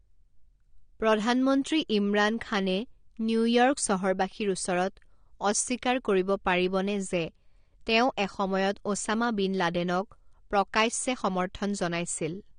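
Throughout the speech, nothing is heard above 9.7 kHz. Sibilants sound fizzy and smeared, and sustained sounds warble. This is likely AAC compression at a bitrate near 32 kbps. The coder drops high bands and quantises the rest coarsely.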